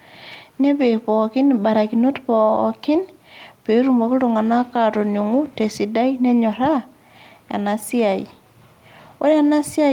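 No technical faults can be heard anywhere in the speech, so there is nothing to describe in time order.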